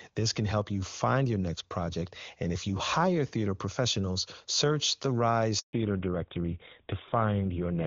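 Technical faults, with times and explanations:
5.59–5.73 s, handover gap: Right after "theater professionals search the", the speech fades within a few tens of milliseconds and stays silent for 140 ms while the call switches networks and no speech frames arrive. The waveform shows a flat stretch, and the spectrogram shows an empty vertical band.
5.73 s to end, fallback to narrowband: Once the link resumes, the speech is duller and rougher. The call has dropped from a clean HD Voice stream, consistent with a high AMR-WB rate, to an older narrowband codec. The spectrogram shows everything above 4 kHz cut off as a sharp horizontal ceiling.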